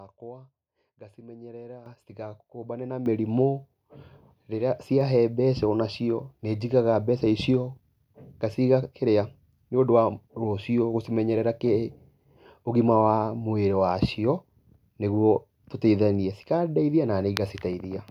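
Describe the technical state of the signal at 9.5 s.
At 9.5 s the speech signal is intact, with no audible fault at that point.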